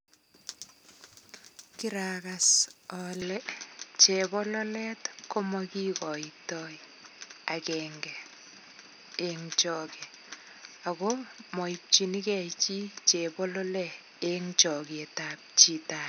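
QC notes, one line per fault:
3.22 s to end, input switched to a poorer device: at 3.22 s the speech turns duller and boxier in an instant, with nothing above 6.2 kHz from then on, a level shift of around 5 dB and a new, faint noise floor roughly 45 dB under the signal, all with no gap at the changeover. The likely cause is the recording jumping to a narrower-band microphone. Unlike a plain low-pass filter or codec bandwidth drop, the tone, level and background noise all change together.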